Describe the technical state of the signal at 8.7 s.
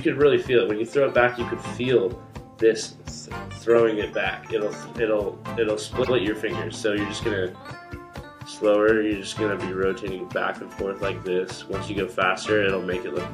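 At 8.7 s the signal is intact, with no dropout, distortion, glitch or other fault to be heard at that point.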